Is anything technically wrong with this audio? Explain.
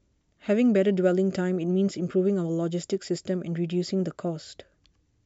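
No, nothing technically wrong can be heard anywhere in this speech recording.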